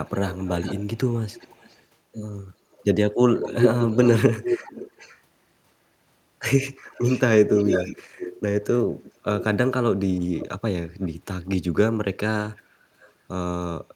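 You get an echo leak through most of the clip: a delayed copy of the speech comes back at 0.05–1.86 s, 2.72–5.21 s, 6.91–9.44 s, 10.38–10.47 s, 11.01–11.09 s and 12.56–13.13 s. The lag creeps from 400 to 472 ms. The middle two stretches are nearly as loud as the speech, the first sits well under it, and the last three are brief, faint scraps. Most likely the far end is on a loudspeaker and its echo canceller isn't fully catching it.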